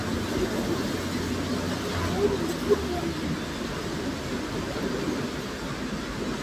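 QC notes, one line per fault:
Nothing stood out on listening to this recording.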